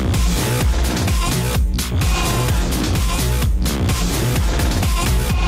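No technical faults can be heard anywhere in this clip.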